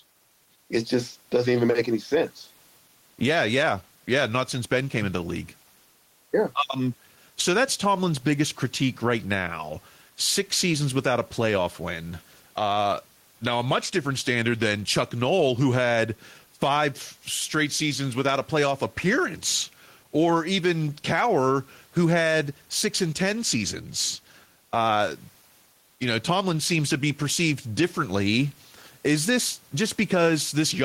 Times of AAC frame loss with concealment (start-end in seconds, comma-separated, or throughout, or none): none